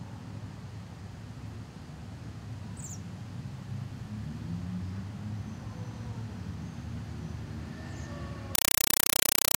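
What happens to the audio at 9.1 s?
Compressed stream played as audio, from 8.55 s to the end: undecoded AC-3 (Dolby Digital) data is sent as samples, giving loud static in 5.33 ms bursts 31.25 times a second.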